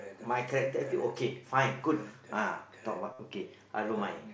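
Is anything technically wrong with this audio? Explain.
Yes. From 3.13 to 3.19 s, concealed Bluetooth headset packet loss replaces about 60 ms of speech with a looped copy of recent waveform. It sounds like a brief buzzy tone with a warble where speech resumes. On a waveform it shows as identical repeating cycles at steady level; on a spectrogram, as flat, unchanging harmonic stripes. The speech passes through the mSBC wideband headset link, with content extending up to 8 kHz.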